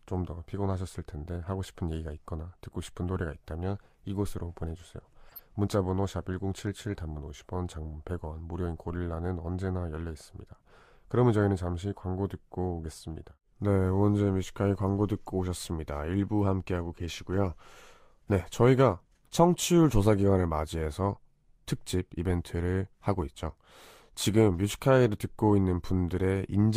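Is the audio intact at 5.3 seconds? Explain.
No. Around 5.29 to 5.40 s the speech hits a corrupt frame decoded fault: flipped bits in a few compressed frames were decoded anyway, so misread gains and codes scatter energy into wrong frequencies, heard as a brief chirpy burst of noise, about -35 dBFS at its peak.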